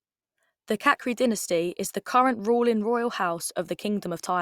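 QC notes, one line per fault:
No fault to note for this speech clip.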